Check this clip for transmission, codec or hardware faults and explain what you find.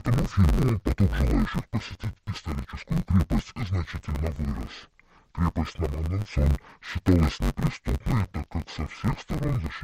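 One fault runs through the whole speech recording: interleaved audio read as planar. In every block of about 10.67 ms, which fits a 512-sample block, alternating left and right samples are split into halves, each stretched to half speed. The blocks are short, so the speech sounds dull and robotic with a buzz near 94 Hz and no clear octave drop.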